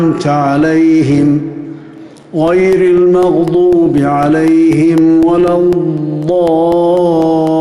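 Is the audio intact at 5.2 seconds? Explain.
No. Periodic USB or driver dropouts run from 1.98 to 7.47 s. Every 0.25 s the driver stalls and roughly a millisecond of audio is replaced with silence, giving a regular train of ticks across the signal at 5.2 s.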